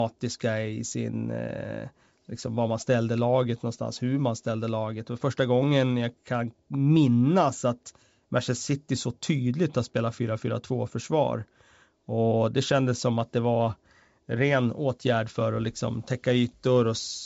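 The speech is carried by G.722 wideband telephone coding at 64 kbit/s, with content extending to about 7 kHz or a little above, and no technical faults can be heard.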